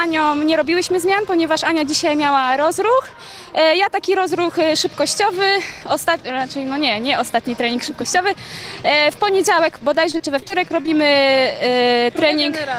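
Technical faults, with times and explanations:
10.11–10.89 s, repeated packet loss (robotic sound): seven short gaps, longest 24 ms, each filled by extending prior audio, leaving the stretch choppy.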